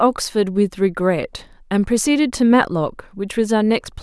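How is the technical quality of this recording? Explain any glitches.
Nothing stood out on listening to this speech recording, so there are no glitches to explain.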